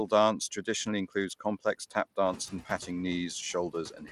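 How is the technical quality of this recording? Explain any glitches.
The speech in this recording has three audible faults: background that pumps, a gritty, band-limited top end, and two places where parts of the speech sound swallowed.

Throughout, the noise floor dips between phrases and surges back underneath them. These are noise suppressor artifacts. The suppressor estimates which frequency bands hold steady noise and turns them down frame by frame, here by about 17 dB. It only acts fully in gaps, so the background breathes with the speech. The effect grows after the room noise rises by about 13 dB near 2.5 s, though that noise still sits about 15 dB under the voice.

Across the whole clip the treble sounds coarse and flickering, with a grainy edge, and nothing at all is present above about 16.8 kHz. The likely cause is Bluetooth SBC compression. SBC splits the signal into a few wide sub-bands and shares bits among them crudely, so the quieter upper bands starve and the rest are roughly quantised. 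The damage is plainly audible and points to a fairly tight stream, around 96 kbps.

From 2.38 to 2.89 s, and again from 3.9 s to the end, bits of speech go faint, adding up to roughly a tenth of a second in the first span and a bit more in the second. This is speech cut by the noise suppressor. It mistook soft, low-level speech detail for noise and pulled it down along with the background, by up to about 9 dB. The affected speech sounds swallowed or faint.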